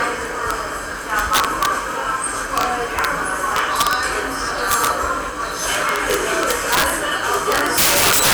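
Integer overflow cracks the loud passages at 0.51 s, 1.19–1.66 s, 2.58–2.63 s, 2.99–3.05 s, 3.56–3.93 s, 4.71–4.87 s, 5.75–6.90 s and 7.34 s to the end. Peaks up to about 10 dB past full scale wrap to the opposite sign, giving harsh snaps far sharper than clipping. The waveform shows abrupt sign-flip jumps, and the spectrogram shows vertical broadband streaks.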